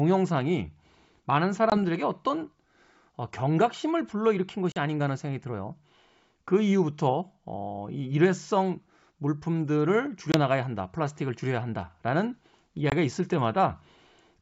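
Sharp-edged gaps of silence cut into the speech at 1.70 to 1.78 s, 4.72 to 4.78 s, 10.32 to 10.36 s and 12.90 to 12.92 s, each followed by brief roughness before the sound settles. This is packet loss on an ADPCM call: about 20 ms of audio vanished each time, 40 ms at 4.72 s, consistent with one or two dropped packets, and the G.722 decoder's predictor and step size lost step with the sender's.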